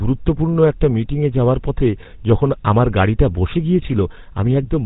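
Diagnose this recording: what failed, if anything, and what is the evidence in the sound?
The failure is at the codec stage. All the way through this speech there's that buzzy, gravelly edge of the GSM full-rate codec, and the damage is plainly audible. Nothing gets through above 4 kHz, so the top is gone and sibilants go dull. The codec models the vocal tract and drives it with a coarse, evenly spaced pulse train that keeps only a third of the excitation detail. That thinned excitation is where the roughness comes from, and it all fits the old 13 kbps full-rate mode.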